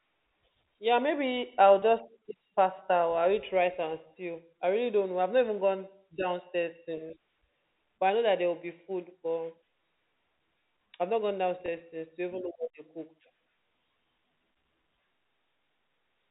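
At 1.80 to 1.82 s, just after "maybe I'll", and again at 11.66 to 11.68 s, between "I've not gone" and "since to even know", the speech briefly holds on a slightly buzzy, frozen tone before carrying on. Both are packet loss with pitch repetition: a single 20 ms packet went missing each time, and the receiver filled the gap by repeating the last pitch period. Across the clip's narrowband telephone sound from G.711 coding, the repair is audible only as that held buzz.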